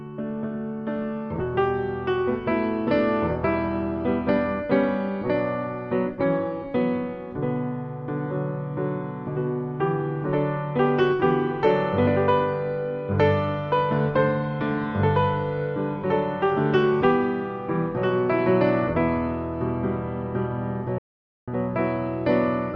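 A playback stall cuts the audio from 20.98 to 21.48 s, a 0.49 s flat gap on the waveform and blank spectrogram columns, likely from the player's buffer running dry.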